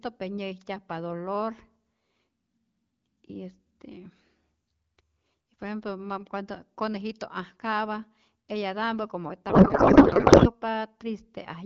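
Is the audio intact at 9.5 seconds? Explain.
No. From 9.49 to 10.53 s a codec payload misread occurs: octet-aligned AMR is being read as bandwidth-efficient, so the decoder finds frame fields in the wrong places. The speech turns into garbled noise and warble that barely follows it.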